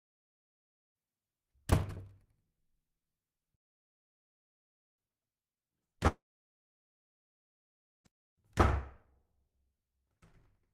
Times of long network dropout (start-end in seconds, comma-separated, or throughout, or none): 6.07-8.06